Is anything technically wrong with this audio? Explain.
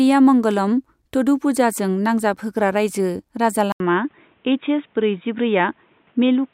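Yes. At 3.72 s the speech cuts out for about 80 ms, then returns dull and boxy through to the end, with nothing above 3.8 kHz and a faint new background noise about 40 dB below the speech. The loudness stays roughly the same. This is likely an input switched to a poorer device: the system swapped to another microphone or a headset's call profile partway through, and that narrower-band path carries its own tone and noise.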